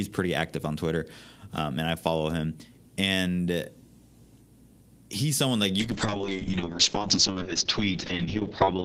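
At 5.8 s, right after "he's someone like", the speech turns rough and watery and stays that way to the end, about 3 s later. It's a call bitrate drop: the encoder was starved of bits, which fits a fall from around 32 kbps to about 7 kbps, and the top of the spectrum closes from 20 kHz to 8 kHz. A simple low-pass filter would only muffle the sound. Here the coarse, swirly texture comes with it, and there are no gaps, so it isn't packet loss.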